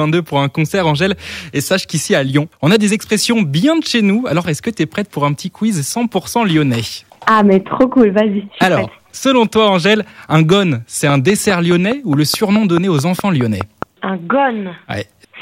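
Throughout, peaks crackle with a brittle edge. This is hard clipping: the signal runs about 6 dB beyond what a stage can pass, so a small fraction of peaks are cut flat. From 11.1 to 13.8 s, a steady ticking of about fifteen sharp pops rises well above the sound, 4.76 per second. This train of clicks likely comes from nearby interference or a faulty connection or power supply.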